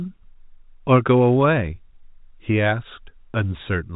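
No technical faults can be heard in this speech, which comes through G.711 telephone coding with nothing above 3.8 kHz.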